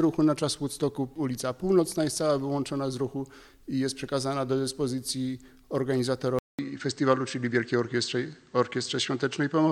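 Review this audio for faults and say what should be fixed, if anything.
At 6.39 s there's a 200 ms gap, then the sound goes dull, nothing above 8.5 kHz, a few dB level jump: likely an input switched to a poorer device. Lock the recording input so the system can't swap devices mid-take.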